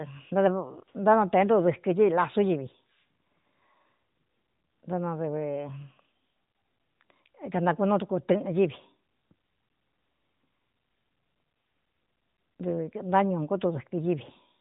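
Speech recording with no technical faults to report.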